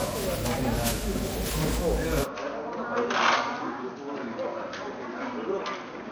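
Generation loss runs through the whole of this everyday-sound recording. Its swirly, smeared, hollow texture and blurred attacks most likely come from repeated MP3 decoding and re-encoding, with the quantisation noise adding up over something like ten passes at a rate that fits 96 kbit/s. An input switch to a poorer device comes in at 2.24 s and lasts to the end, with no gap at the change. The band suddenly stops at 6.4 kHz, the level falls by about 10 dB, and a new noise floor appears about 35 dB below the signal. This is likely a change to another microphone or to a headset's call profile.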